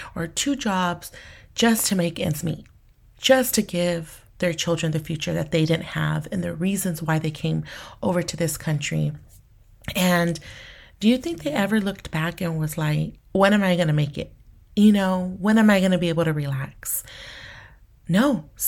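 Nothing's wrong with this speech recording; there's no technical fault to point to anywhere in it.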